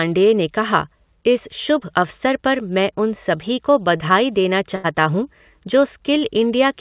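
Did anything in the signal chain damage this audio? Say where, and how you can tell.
Yes. At 1.80 to 1.83 s and 3.97 to 4.02 s there are brief smears, each a quick wobble only a few hundredths of a second long. This is short concealed packet loss in the network stage: about 20 ms of audio arrived too late, and the receiver covered the gap by extending the preceding sound before blending back.

At 4.76 to 4.86 s the last sound is stretched and fades, then resumes further along. That is a burst of packet loss, with roughly 80 ms lost in transit. The receiver stretched the last sound while turning it down, so the audio in between is missing, against the G.711 call path's steady 4 kHz band limit.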